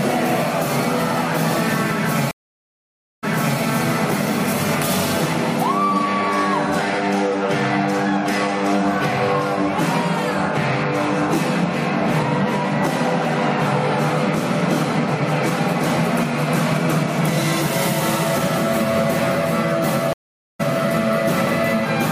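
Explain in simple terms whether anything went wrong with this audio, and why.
Two stream reconnects occur: at 2.31 to 3.60 s the sound stops for 0.92 s and restarts 0.37 s back, repeating a moment; at 20.13 to 20.61 s a 0.46 s gap skips about half a second ahead. Unlike a simple dropout, the sound never resumes where it stopped.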